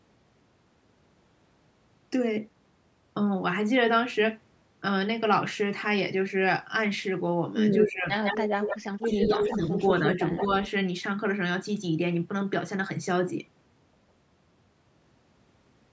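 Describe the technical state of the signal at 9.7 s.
Speech suppressed in double talk runs from 8.99 to 9.71 s. The level dips by about 10 dB in pieces, likely because an echo canceller turned down the talker during overlapping speech. Echo leak follows from 9.72 to 9.81 s: a copy about 10 dB down arrives 155 ms late, likely residual loudspeaker echo that slipped past cancellation.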